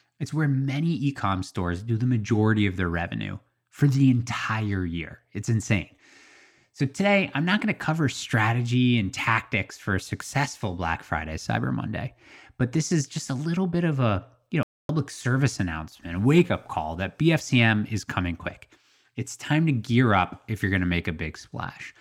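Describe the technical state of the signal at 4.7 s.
At 4.7 s the speech signal is intact, with no dropout, clipping, distortion or other fault to be heard.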